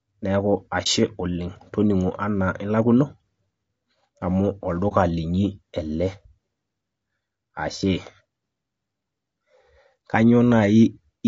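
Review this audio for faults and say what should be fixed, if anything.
The speech has low-delay AAC compression damage throughout. It sounds rough and grainy, with noise between the harmonics and a thin, synthetic top band. The likely cause is AAC-ELD's short frames at a low bitrate, around 32 kbps. Raise the bitrate or use a longer-frame codec where delay allows.

There are two dropouts from AAC frame loss with muting, at 0.83 to 0.87 s and 4.88 to 4.93 s. Each is a brief dip. It fits one lost frame of about 30 ms, zeroed and faded through the overlapping windows. Add packet-loss concealment or forward error correction to cover lost frames.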